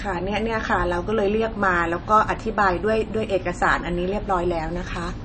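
From start to finish the speech is dull and band-limited, with nothing above about 8.3 kHz, plus the smeary, watery texture you get from aggressive MP3 coding. The likely cause is low-bitrate audio saved at a high bitrate: a very low-rate MP3, somewhere around 32 kbit/s, re-encoded as a much higher-rate MP3, roughly 192 kbit/s. The bigger file can't bring back what the first pass threw away, so the cut-off and artefacts stay.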